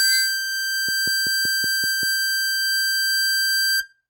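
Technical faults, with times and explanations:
0.89 to 2.04 s, train of clicks: steady ticking sits over the music. About seven clicks come evenly spaced at 5.24 per second. Each has the same shape and peaks about as loud as the music. Nearby interference or a faulty connection is the likely cause.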